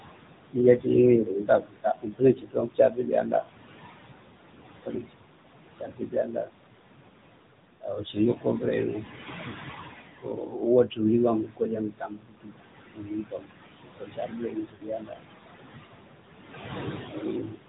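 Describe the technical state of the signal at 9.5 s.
Lost AMR speech frames hit from 9.48 to 9.56 s. Corrupted frames were discarded, so the decoder reused the last good pitch and vocal-tract settings at falling gain. The sound smears and drops away over roughly 60 ms, consistent with about three frames, then returns briefly weak or rough.

Underneath, the AMR narrowband mobile codec at 10.2 kbps is plainly audible. Nothing above 4 kHz survives, and the pulse-driven vocal-tract model gives the speech a buzzy, synthetic edge.

Noise suppressor artifacts are present too. Steady noise is pulled down by about 20 dB frame by frame, leaving a residue that rises and sinks with the speech. The room noise beneath it, about 10 dB below the speech, is part of the recording.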